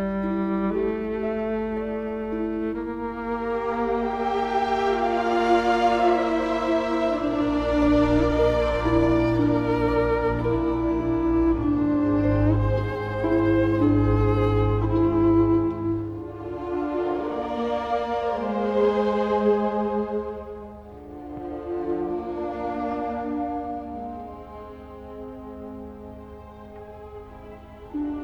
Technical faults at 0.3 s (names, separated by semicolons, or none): none